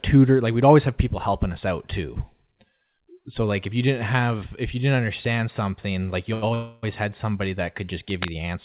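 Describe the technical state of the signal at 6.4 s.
At 6.4 s the signal is in a short stall from a late packet, running from 6.34 to 6.44 s, just after "understand something like you". A packet missed its playout time and the jitter buffer ran dry, so the receiver stretched the preceding sound by about 81 ms until the data arrived, then resumed where it stopped. Nothing is lost, but the sound is held unnaturally long with a faint buzz or dip, and playout lags about 81 ms afterwards.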